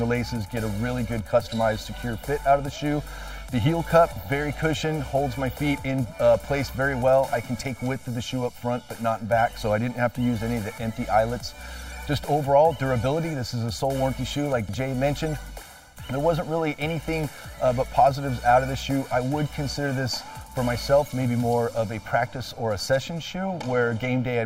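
Throughout, channel delay of about 1.5 ms comb-filters the mono sum: fixed notches from around 400 Hz sound hollow, unlike a phaser's moving ones.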